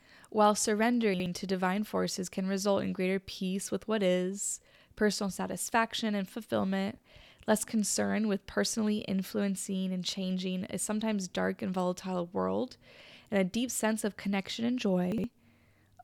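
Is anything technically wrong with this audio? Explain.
Yes, there are chunks out of order at 1.14–1.26 s, just before "to divine forces can", and at 15.12–15.24 s, right after "sense of connection and". Each time a 60 ms chunk lands one slot late, so it plays after the chunk that should follow it. You hear a quick jumbled moment.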